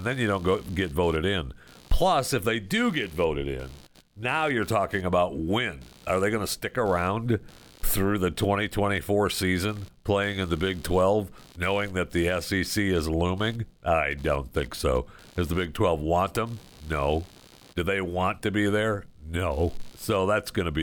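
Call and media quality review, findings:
Computer activity noise, present for the full duration of the speech. Buzzing, chirping texture pulsing at around 70 Hz, roughly 30 dB below the speech, tracking machine activity rather than the talker. Probable component: host computer ground shared with the audio input. Mechanism: processor, graphics card or mouse load changes shift ground potential, modulating the audio path.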